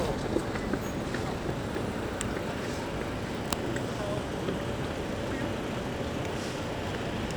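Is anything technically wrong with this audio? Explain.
No, nothing technically wrong can be heard in this audio. There is no fault to point to anywhere in the clip.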